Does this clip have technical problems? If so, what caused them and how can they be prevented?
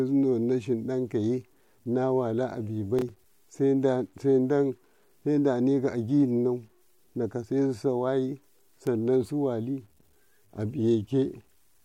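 Yes. Low bit depth without dither: the speech was likely cut to very few bits, consistent with about 9-bit truncation, leaving grainy distortion about 45 dB down that follows the voice throughout. Keeping 16 bits or more, or adding dither before reducing word length, prevents it.

Processor overload crackle: from 2.99 to 3.24 s the processor missed about five buffer deadlines of a few milliseconds each, leaving hard-edged silent gaps heard as a burst of crackle. Reducing CPU load or enlarging the audio buffer prevents it.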